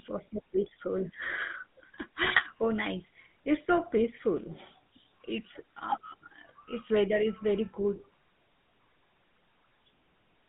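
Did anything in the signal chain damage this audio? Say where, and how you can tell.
Yes, two stages left their mark. The whole clip went through the GSM full-rate codec. The speech has that gravelly, buzzy roughness you get when the vocal tract is modelled and driven by a sparse, regularly spaced pulse excitation. Detail like breath and sibilance is lost along with the fine structure. The band sits at roughly 150 Hz to 3.6 kHz. The damage is plainly audible and fits the old 13 kbps full-rate coder.

The second problem is GSM bit errors on the radio link, from 2.24 to 2.42 s, just before "oh nice". Here the speech breaks into a short burst of squawk and gargle, with jumps in level. Flipped bits reached the decoder and corrupted the filter, pitch and gain parameters, so each affected frame came out with a bent spectrum or the wrong level. The length of the burst fits about seven damaged frames, and the density points to a bit error rate near 3%.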